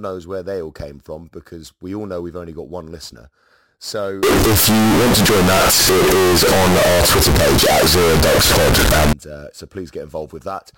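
From 4.23 to 9.13 s, ending just before "uh so", the speech becomes a loud, harsh buzz with noise as loud as the talker, pitch still traceable. Float read as integer is the likely cause, with sign and exponent bits setting each value. The waveform turns near-square at an almost fixed, high level, and the spectrogram fills with dense broadband energy.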